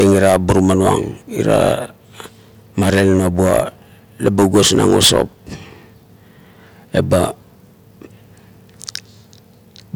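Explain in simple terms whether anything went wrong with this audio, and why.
Nothing went wrong with this audio, since the speech carries no fault that a listener could point to.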